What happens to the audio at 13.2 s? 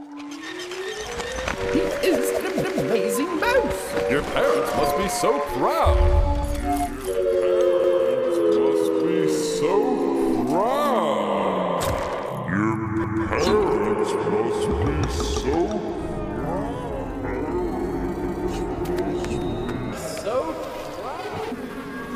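At 13.2 s the audio is at the end of an overlapping-chunks fault that runs from 13.04 to 13.24 s. The chunk that begins here starts about 200 ms before the previous one finished, so that 200 ms stretch of sound is played twice in a row. It comes across as a brief stutter or click at the join. The position fits audio that was handled in 5-second chunks.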